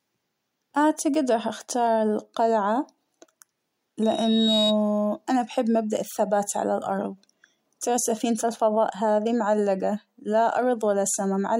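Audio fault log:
4.02–4.78 s, loudspeaker feedback squeal: a 3.8 kHz tone swells over about half a second to roughly 5 dB above the speech. The microphone-to-speaker loop gain exceeds one there.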